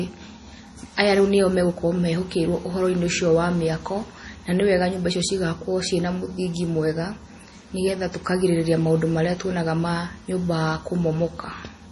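From start to finish the speech has a watery, swirly quality, with the top end cut off flat, so nothing sits above about 11.4 kHz. That's likely MP3 compression working hard, and the heavy damage fits a low bitrate around 32 kbps. Starved of bits, the encoder drops the treble and zeroes quieter frequency lines, which flicker in and out frame to frame. That flicker gives the warbly texture, and the s sounds come out chirpy and smeared.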